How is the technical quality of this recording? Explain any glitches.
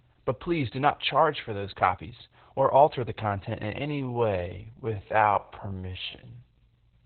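The technical quality is poor. Heavy compression runs through the whole recording, and the second half is slowed down.

Opus voice compression affects the entire clip. The sound is cut off at about 4 kHz, so it is narrowband. That fits Opus in its SILK mode at a very low rate, around 8 kbps. SILK models speech with linear prediction and codes the excitation coarsely at this rate. The result is muffled and hoarse. There is also a slightly robotic edge.

A time-stretched section starts at 3.83 s, right after "alter the content in", and runs to the end at 7.06 s. The pace drops abruptly to about 0.54 times normal speed, yet the pitch does not fall. The likely cause is software lengthening the audio by repeating short pieces. Because of that, this stretch drags.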